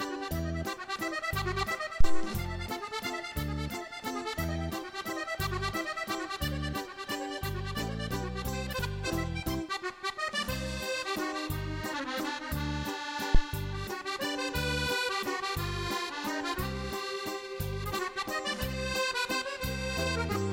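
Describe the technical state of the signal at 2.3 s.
At 2.3 s the signal is in the last moments of a phantom power thump that runs from 2.00 to 2.33 s. A supply switching on or off on the live input sends a voltage step through the coupling capacitors, heard as a deep thump peaking at about -11 dBFS and dying away with a decay of roughly 73 ms. Unlike a handling bump, it is a single low-frequency thump with no rattle or scrape.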